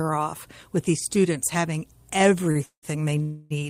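Speech, with three timing faults near the end. At 2.51 to 2.57 s, a short stall from a late packet holds the last sound for only 39 ms, a brief held stretch, then the speech resumes with nothing lost. Its brevity sets it apart from the longer call audio freezes that follow. The first runs from 2.65 to 2.85 s, where the held sound fades into about 100 ms of silence. The second, from 3.23 to 3.52 s, is a 277 ms hold that never goes quiet. Both are likely delayed packets emptying the jitter buffer. Unlike a dropout, each freeze inserts a gap and the speech continues from where it stopped, so nothing is cut out.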